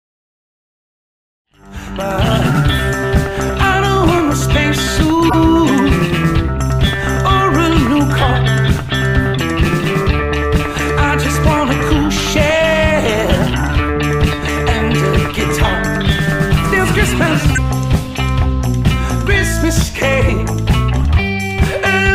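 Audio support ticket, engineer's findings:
Corrupt frame decoded: short squeaks and noise bursts at 5.29–5.38 s, 10.21 s, 17.54–17.58 s and 21.02–21.05 s. Decoder played damaged compressed frames, spreading energy to wrong frequencies across a few frames each. First burst is the strongest, later ones lower. Fade-in up to 2.58 s clean.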